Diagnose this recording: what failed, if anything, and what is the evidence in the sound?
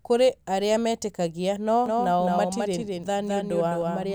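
Doubled audio track from 1.86 s to the end: a dry copy of the speech trails by about 200 ms, roughly 5 dB down, likely captured twice through a slower path.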